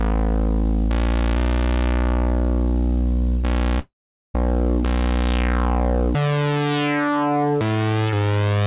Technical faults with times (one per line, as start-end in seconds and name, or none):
3.79-4.35 long network dropout